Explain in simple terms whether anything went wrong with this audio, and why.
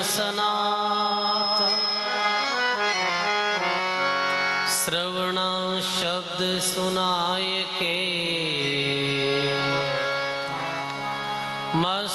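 There's gain pumping all through the clip. The sound gets shoved right down whenever something loud comes in, and that swing is big. The likely cause is an input level set far too high, with a fast limiter clamping it.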